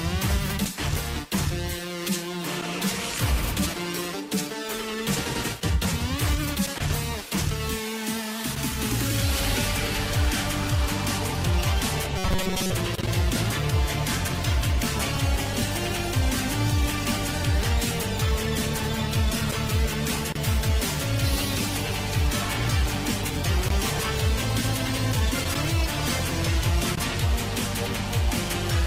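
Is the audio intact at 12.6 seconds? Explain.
No. From 12.18 to 12.72 s there is a robotic sound, likely from a repeated short buffer looping about every 5.3 ms. It imposes a rigid 188 Hz metallic buzz, seen as identical repeating waveform cycles and evenly spaced spectrogram harmonics.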